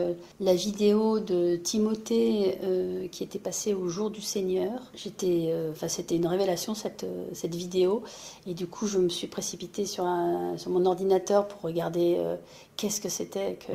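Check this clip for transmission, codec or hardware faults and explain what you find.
No transmission, codec or hardware faults turn up anywhere in the recording, and the signal holds steady throughout with no dropouts, glitches or distortion to report.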